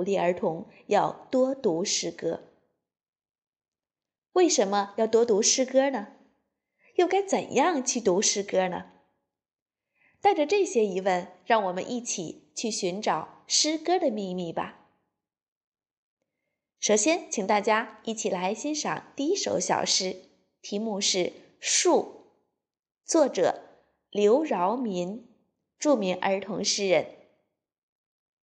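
No technical faults are audible.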